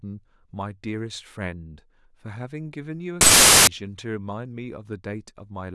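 Packed 24-bit samples appear to be read back as 16-bit integers between 3.21 and 3.67 s in this speech recording. That is a wrong sample width fault. Most of the resulting values mix bytes from neighbouring samples, so the passage becomes loud, harsh noise with the speech only faintly audible beneath it. Because each 24-bit sample is split across one and a half reads, that stretch plays at about 0.667 times speed and drops in pitch.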